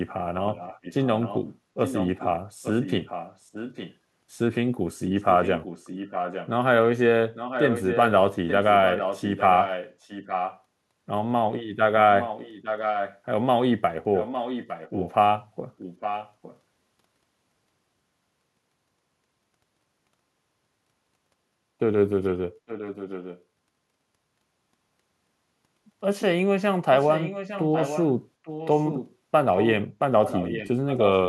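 A far-end echo canceller likely failed to remove loudspeaker pickup, so this speech carries an echo leak: a copy 857 ms late, roughly 5 to 15 dB below the voice, at 0.53–3.95, 5.19–10.62, 12.19–13.18, 14.17–16.58, 22.67–23.43 and 26.97–31.28 s.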